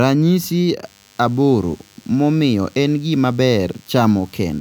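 A speech clip with DECT cordless phone buzz coming in at 0.85 s and running right to the end. It's a thin, steady 100 Hz buzz full of harmonics, sitting well below the speech, from a nearby handset or base firing radio bursts every 10 ms that the audio circuitry rectifies.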